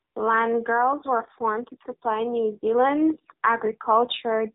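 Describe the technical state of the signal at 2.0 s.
At 2.0 s the speech sits midway through an automatic gain rise from 0.66 to 3.23 s. The control lifts its gain by about 4 dB, so voice and background swell together, unlike a speaker simply growing louder. Throughout, the AMR narrowband mobile codec cuts everything above 3.8 kHz and rebuilds the voice from a sparse vocal-tract model, giving a buzzy, synthetic tone that fits a low mode near 7.4 kbps, distinct from plain band-limiting without that artificial quality.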